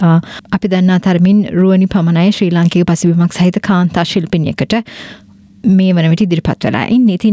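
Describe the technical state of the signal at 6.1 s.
At 6.1 s, as throughout the clip, there is gain pumping: the gain ducks by around 10 dB under each loud sound, likely from excessive input gain driving a fast limiter. The waveform looks flattened, and the spectrogram shows nothing above 8 kHz from call processing.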